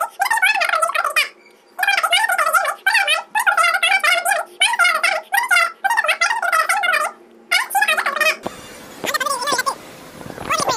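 Throughout the whole clip the audio runs at a wrong sample rate: everything plays about 2.76 times too fast and sits roughly 17.6 semitones high, nearly an octave and a half, with speed and pitch rising together by the same ratio. That locked ratio is the mark of samples clocked out faster than they were captured with no resampling in between, which fits audio recorded at 16 kHz being played back at 44.1 kHz.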